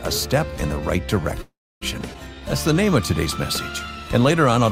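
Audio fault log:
1.41–1.83 s, call audio freeze: the sound stops and a short fading buzz carries on, then about 0.28 s of silence, before playback resumes where it left off. This likely comes from delayed packets emptying the jitter buffer. On a spectrogram, smeared decaying bands lead into a blank gap, and the waveform flattens to near silence.
2.13–2.16 s, skip ahead: playback jumps forward with almost no gap, losing about a tenth of a second of audio, with the two sides spliced together. The waveform shows an abrupt join, and the spectrogram shows harmonic tracks changing suddenly at one vertical line instead of gliding.
2.35–2.91 s and 3.97–4.51 s, jitter buffer slow-down: pitch periods were repeated to rebuild the buffer, stretching the audio to 90% speed (67 ms added) and then 94% (38 ms added). Sounds drag at unchanged pitch, so harmonics stay level while features widen in time.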